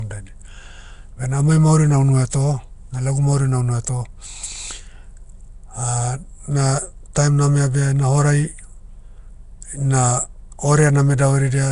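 Throughout, the speech sounds rough, hissy and smeared, almost underwater, likely from Nellymoser compression. The spectrogram shows grainy, noise-filled bands and nothing above 10.7 kHz.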